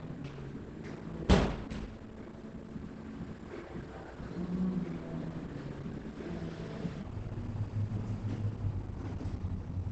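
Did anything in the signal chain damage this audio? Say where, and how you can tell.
Yes. At the codec stage, the whole clip sounds muffled and hoarse, with nothing above 8.4 kHz. This points to Opus compression, likely at a low rate near 16 kbps. That pushes the encoder into its speech-oriented SILK mode, which trims bandwidth and coarsens detail.

At the playback or editing stage, from 7.03 s to the end, the sound abruptly drops in pitch and drags. This is a section at the wrong speed, running at 0.54 times normal. Pitch falls about ten semitones along with tempo, which points to the likely cause: that part being clocked at the wrong rate.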